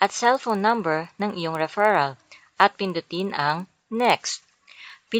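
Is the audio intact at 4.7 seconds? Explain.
No. At 4.7 seconds, as across the whole clip, the sound carries a regular ticking at 20 per second, riding on the signal. This comes from a resampler restarted on every block: the conversion from 16 kHz to 48 kHz was done on 50 ms blocks in isolation, so each block edge lacked its true neighbouring samples and picked up a small error, repeating at the block rate.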